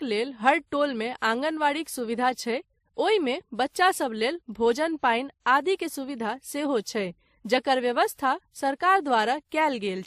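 It's a speech clip, and all the way through it you get two sets of compression artefacts stacked on top of each other. The likely cause is transcoding between lossy codecs: the smeary, swirly texture fits a low-rate MP3 around 40 kbit/s, and that was then re-encoded to something like 96 kbit/s WMA. The second pass wastes bits faithfully preserving the first one's damage while adding its own grit, and there's nothing above 15 kHz.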